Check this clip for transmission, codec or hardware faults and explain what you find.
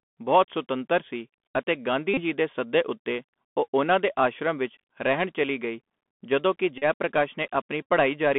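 Two faults are present: a narrowband Bluetooth headset codec throughout the speech, and three short bursts where headset packets were repeated.

The Bluetooth CVSD headset codec colours the whole recording. The line is confined to roughly 200 Hz to 3.5 kHz, so there is no air or sibilant sparkle. The codec sends one bit per sample at 64 kHz, and its adaptive step lags behind fast, loud high-frequency sound, leaving s sounds scratchy and a granular hiss under the speech. That grain and slope distortion sets it apart from a plain band-limited phone line, which would sound dull but clean.

Bluetooth headset packet repeats occur at 2.14–2.21 s, between "ਬਹੁਤ ਸੁਤੰਤਰ ਸੀ ਅਤੇ" and "ਦੇ ਸੱਦੇ"; at 6.78–6.84 s, just after "ਚੱਲੀ ਗਈ ਜਦੋਂ ਕਿ"; and as a brief buzz at 7.83 s. Lost packets were replaced by re-decoding the previous packet's bits. Each 3.75 ms slot repeats, so the two longer gaps of about 34 ms and 38 ms turn into a steady buzz near 267 Hz. 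These fit runs of about nine and ten lost packets. The 7.83 s event, about 22 ms or six packets, is a shorter burst of the same buzz. The periodic buzz distinguishes these repeats from dropouts, which would go silent.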